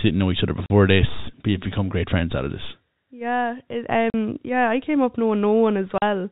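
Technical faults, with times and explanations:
0.66 s, 4.10 s and 5.98 s: packet loss filled with silence. The speech cuts out for 40 ms each time, first between "didn't know each other" and "this but you've become", which fits two consecutive 20 ms packets lost and replaced by silence. The abrupt drop to silence and the sudden return give each gap hard edges. On a waveform each gap is a flat line with square edges, and on a spectrogram it is a blank vertical strip across the band-limited telephone-quality spectrum, with thin broadband lines at each edge.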